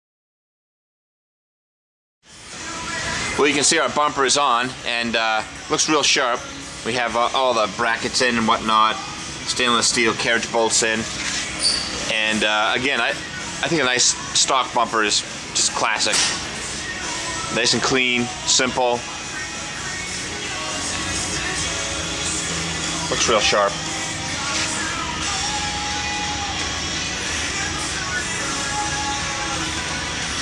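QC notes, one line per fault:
No faults were heard anywhere in the audio. Nothing here needs a timestamp or a further note.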